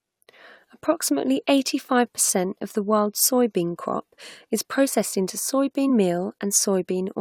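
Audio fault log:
3.22 s and 5.89 s, damaged data in a compressed stream: two very brief blips break into the speech, the first between "percent of the world's" and "crop is processed into", the second just after "crop is processed into". Each lasts about 10 to 15 ms. Corrupted bytes in the compressed stream made the decoder misread those frames and lose sync. It emitted garbage for a moment while it searched for the next valid frame header.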